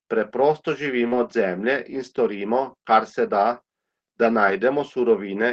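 Speech carried over a WebRTC call path using Opus, with audio content reaching up to about 8 kHz. From 1.07 to 1.14 s there is short concealed packet loss. Roughly 40 ms of audio never arrived in time, and the decoder extended the preceding sound to cover the hole before blending back into the real signal, which leaves a brief smeared, wobbly patch. Overlapping its tail, from 1.12 to 1.18 s, comes a lost packet rebuilt from error correction. About 40 ms, which fits two packets, was restored from the low-bitrate redundant copy carried in the following packet, so nothing drops out, but that stretch sounds coarser and noisier than its surroundings. The same error-correction rebuild occurs again from 4.46 to 4.52 s, another roughly 40 ms span with the same rough, grainy texture and no audible gap.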